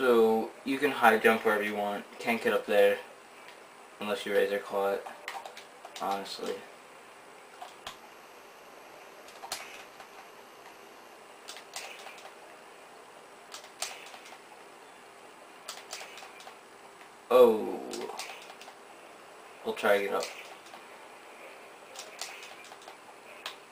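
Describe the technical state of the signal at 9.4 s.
Periodic clock jitter runs from 7.87 to 11.17 s, so it covers 9.4 s. Interference is wobbling the converter's sampling clock at roughly 3 kHz. That spreads sidebands about 3 kHz above and below every component, strongest on high content, and gives the sound a rough, metallic edge that disappears in silence.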